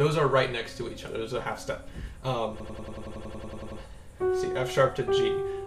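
A system hang loop runs from 2.60 to 3.81 s. The computer or its audio driver stalled, but the sound hardware kept replaying the contents of its ring buffer. A single 92.88 ms slice repeats exactly, 13 times, at about 10.8 Hz, which fits a 4096-sample buffer. At that length each repeat is distinct, so the sound becomes a rapid machine-gun stutter rather than a buzz. The sound then resumes without any obvious gap.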